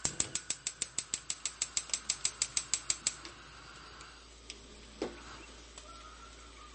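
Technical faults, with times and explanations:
Throughout, MP3 compression: the audio has a dull top with nothing above about 8.4 kHz, and a plainly audible watery, swirling texture where fine detail flickers in and out. This is likely heavy MP3 encoding at a very low rate, consistent with roughly 35 kbps. Starved of bits, the encoder cuts the treble at a fixed point and drops quieter frequency components, which pop in and out from frame to frame and leave that unstable, smeared sound.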